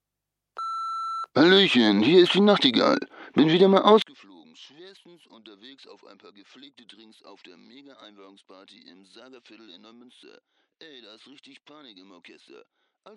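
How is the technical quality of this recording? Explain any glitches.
The recording has one serious fault. From 4.02 s to the end, the level collapses by about 32 dB, likely because one channel is inverted, so shared content cancels when summed. The waveform shrinks to a near-flat trace and the spectrogram goes almost blank.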